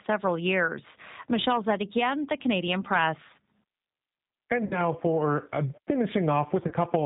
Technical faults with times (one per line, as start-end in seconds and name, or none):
0.00-7.05 G.729 codec
4.65-4.81 VoIP packet loss concealed by the speech codec
6.68-6.73 VoIP packet loss concealed by the speech codec